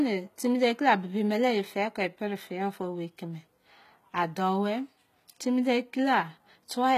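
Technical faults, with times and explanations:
Throughout, HE-AAC compression: the treble tops out at 14.9 kHz and the speech has plainly audible codec damage, with s sounds going gritty and metallic, likely from spectral band replication copying lower bands upward, which fits a low bitrate near 20 kbps.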